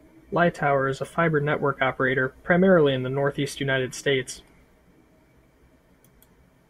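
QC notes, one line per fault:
No technical faults are audible in the signal.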